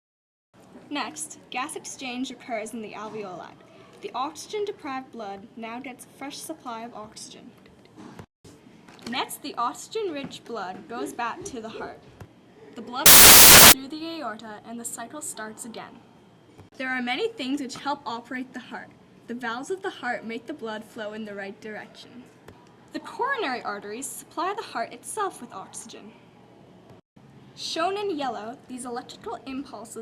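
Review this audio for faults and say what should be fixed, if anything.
From 13.06 to 13.72 s, samples built from the wrong bytes turn the sound into loud broadband noise. The byte order or alignment was misread, so the rapidly changing low bits became each sample's large part. A spectrogram shows energy flooding every frequency; the waveform becomes a dense block. Prevent it by checking the declared sample format, byte order and frame alignment at every point where raw audio is read or reassembled.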